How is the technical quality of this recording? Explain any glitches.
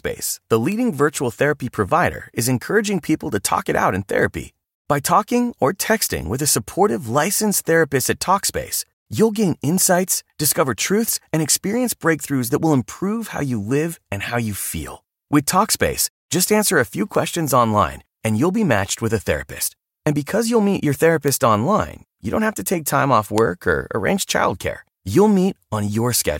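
There are four glitches, all bit error spikes: single sharp ticks at 0.72 s (just before "virtual therapy provider is"), 17.15 s (between "just answer a few" and "online and you'll be"), 21.28 s, and 23.38 s (between "to take time off" and "or arrange childcare"). Each is a flipped bit that makes a sample value jump by a power of two and snap back. The ticks sound like one or three samples long and hit about -8, -14, -2 and -2 dBFS.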